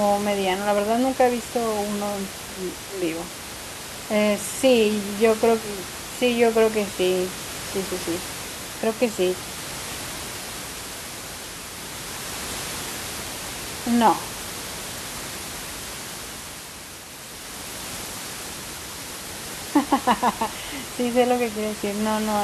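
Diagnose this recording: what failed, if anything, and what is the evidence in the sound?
Nothing in the signal chain has failed: the speech arrives intact at every stage, and the only other sound is the room's own background noise, which sits about 11 dB below the speech and belongs to the recording rather than to any part of the system.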